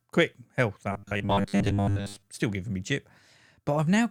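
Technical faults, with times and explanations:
0.92 to 2.29 s, robotic sound from repeated short buffers: just after "quick health" the speech turns into a rigid, metallic buzz pitched at 100 Hz that loosely tracks the words, until "still giving me jip". The likely cause is audio arriving too seldom, so playback keeps looping the last 10 ms chunk, which fits a buffer of that length, for roughly 70 percent of this stretch while the real audio is skipped, imposing that fixed pitch.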